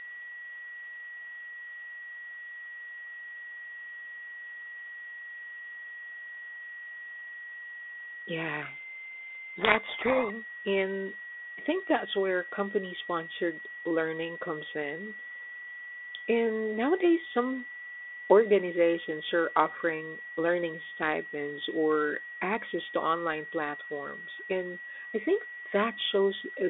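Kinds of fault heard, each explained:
Switching supply whistle: a power supply's switching converter cycles at an audible rate, leaking a thin tone near 2 kHz, wandering between 1.91 and 1.96 kHz, about 20 dB below the speech, present for the whole recording.
Codec payload misread: from 8.62 to 10.32 s the decoder unpacks G.726 code words with their bits in the wrong order, so each sample's difference value is wrong and the speech over the 32 kbit/s telephone-band link sinks under harsh, rasping distortion until correct decoding resumes.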